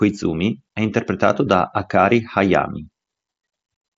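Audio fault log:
No faults logged; the speech comes over a Bluetooth mSBC headset link working as intended, with nothing above about 7.7 kHz.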